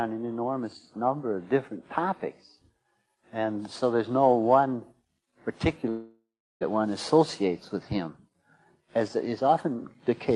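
From 5.89 s to 6.63 s, about 0.72 s of audio is missing, most likely from a long network dropout. At 5.89 s the last sound is stretched into a decaying buzz or hiss, then fades to silence for roughly the final 0.36 s of the gap. At 6.63 s the audio resumes further along, with the missing stretch simply absent. The band-limited top end, near 12 kHz and consistent with an Opus call path, is unaffected.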